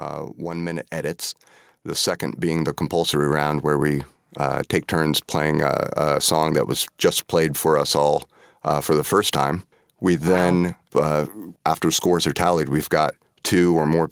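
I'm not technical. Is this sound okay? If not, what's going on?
No, not quite. Early on there's automatic gain rising: the recording device decided the input was too quiet and turned itself up. It's gradual, so the voice and the background noise swell together, first from 0.38 to 1.27 seconds, then again, a bit more noticeably, from 1.84 to 3.74 seconds, just before "we uh take turns". It's the recorder adjusting its own volume, not the speaker changing how loudly they talk.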